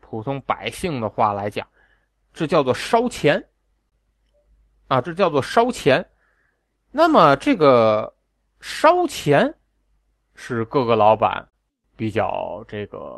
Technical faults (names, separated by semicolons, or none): clock drift between sender and receiver; repeated timing corrections; short stall from a late packet